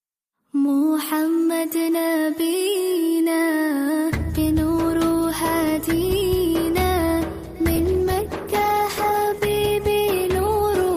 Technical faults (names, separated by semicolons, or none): call bitrate drop